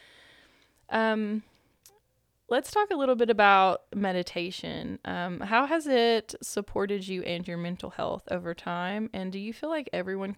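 No technical faults can be heard anywhere in the speech. Nothing in the recording chain draws attention to itself at any point.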